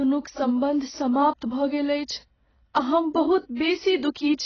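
From start to finish the speech sounds dull and smeared, with nothing above about 6.8 kHz and a fizzy, warbling edge on sibilants. That's heavy AAC compression damage, likely from AAC-LC squeezed to a very low bitrate, which fits something around 16 kbps.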